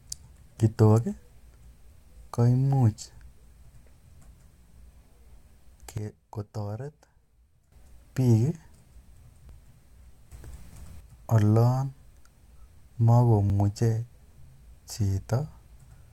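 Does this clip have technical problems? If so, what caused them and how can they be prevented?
Yes. The speech has two kinds of fault.

Overlap between stream segments produces three short clicks or skips at 5.51 s, 9.49 s and 13.50 s, spaced 4 s apart, matching the segment length. At each boundary the time stamps of neighbouring segments overlap, and the player discards the overlapping stretch even though that audio was not duplicated. Between 6 and 17 milliseconds of real signal vanish, and the waveform jumps. Prevention: generate segment time stamps from a continuous sample counter so boundaries abut exactly.

A sudden gain jump drops the level by about 12 dB from 5.98 s to 7.72 s and raises it by about 8 dB from 10.32 s to 11.00 s. Speech and background noise step together at each edge. The likely cause is a gain setting or bit shift applied instantly instead of ramped. Prevention: smooth every gain change with a short ramp of a few milliseconds.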